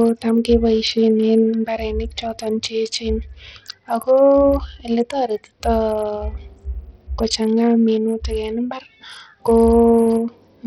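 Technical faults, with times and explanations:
Throughout, Bluetooth SBC compression: the speech has a gritty, coarse grain, with treble that thins out and flickers and aliasing riding on it. This likely comes from a low SBC bit pool, around 64 kbps, starving the upper sub-bands and crudely quantising the rest.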